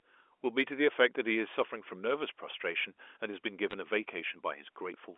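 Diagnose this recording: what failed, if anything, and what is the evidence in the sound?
What failed is the digital line itself, in the form of bit errors on a digital phone line. Right around 3.70 to 3.73 s there's a short burst of sharp ticks and crackle sitting on top of the speech, with the speech underneath unchanged. Each flipped bit corrupts a single logarithmic sample, and a hit on the sign or a high-order bit throws it way off, so you get a spike. The density points to an error rate of roughly half a percent, concentrated in that brief stretch. The G.711 band-limiting to about 300 Hz to 3.4 kHz is just the normal phone sound.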